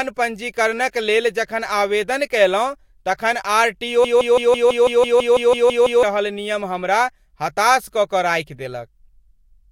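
A stall in the player or stream most likely left it resending its last buffered fragment, producing a broken-record loop from 4.05 to 6.03 s: just after "तखन आर टी ओ", a 165 ms slice of speech repeats twelve times back to back, stuttering mechanically until "रहल नियम हमरा हताश", with the intervening speech lost.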